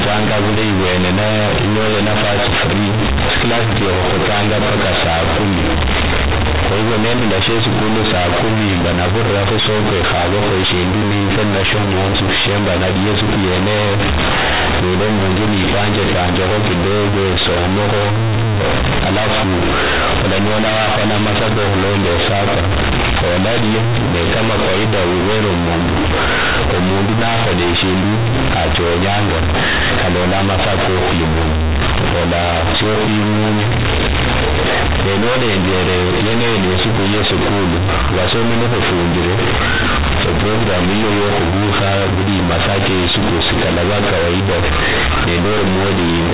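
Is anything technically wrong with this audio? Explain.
Yes. Throughout the speech, the sound is extremely loud and buzzy, with harsh distortion and heavy noise filling the pauses. This is companded audio read as linear: A-law bytes are played as raw 8-bit samples without expansion, so every sign change jumps across half the range and quiet passages become as large as loud ones. The underlying G.711 telephone coding at 8 kHz is intact.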